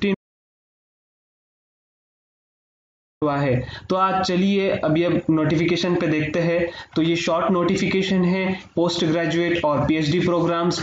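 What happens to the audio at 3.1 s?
At 3.1 s the audio is still inside an audio dropout to silence running from 0.15 to 3.22 s, about 3.07 s of silence with no room tone. The input was likely lost while recording continued. The waveform shows a flat line and the spectrogram a blank band until sound resumes abruptly at 3.22 s.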